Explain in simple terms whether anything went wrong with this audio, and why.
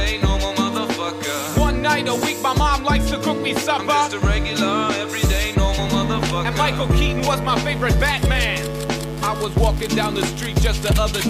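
Something does go wrong at about 7.49 s: a mains buzz comes in and stays until the very end. It's a steady, raspy buzz sitting well under the main sound. It's interference from the 60 Hz power supply, most likely a dimmer, a rectifier or a poorly shielded cable letting sharp spikes into the audio twice per cycle. Those spikes carry a whole stack of harmonics, which gives it that gritty edge instead of a smooth hum.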